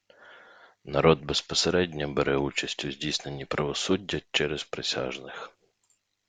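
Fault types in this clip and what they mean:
No technical faults can be heard in this recording.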